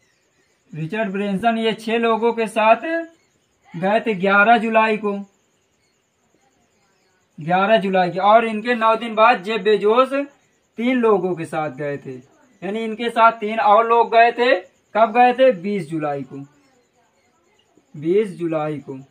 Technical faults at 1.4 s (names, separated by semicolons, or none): lost LE Audio frames